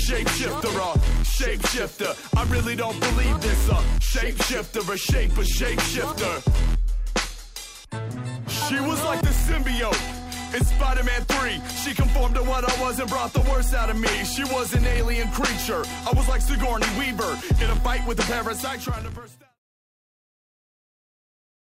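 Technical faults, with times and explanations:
The signal carries no audible technical faults, and its level tapers away evenly from about 18 s to 19.6 s in an ordinary editorial fade-out with no click or hard edge.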